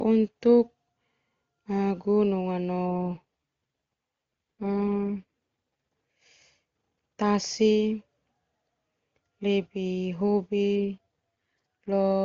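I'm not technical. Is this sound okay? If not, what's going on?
No. There is an AMR rate drop twice, from 2.86 to 5.25 s and from 10.78 to 11.90 s. During those stretches the voice turns rough and synthetic, then returns to the clearer HD Voice sound. On a weak phone signal, the network tells the call codec to spend fewer of its bits on the voice and more on protecting against errors, so detail is lost. Nothing drops out, and the voice keeps the same range of high and low tones.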